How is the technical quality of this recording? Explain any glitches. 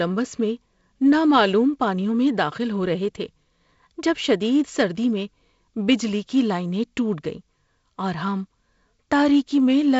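The speech comes through G.722 wideband telephone coding at 48 kbit/s, so the band stops near 7.7 kHz and there is the light, slightly noisy texture expected when the lower band is coded with fewer bits, with no glitches anywhere in the recording.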